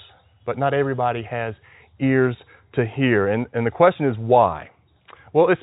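Speech, with no technical faults to report.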